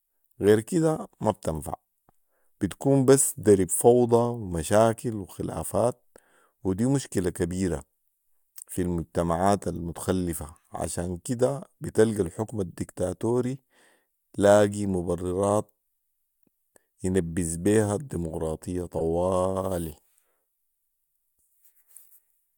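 Speech with three short glitches at 7.79 s, 12.70–12.74 s and 18.98–19.01 s, the last loudest: each is a corrupt frame decoded, bit-damaged data played as stray energy.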